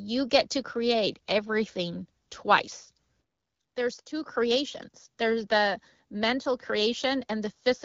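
It's a speech recording carried over an AMR wideband (HD Voice) call connection, and nothing technically wrong turns up anywhere in it.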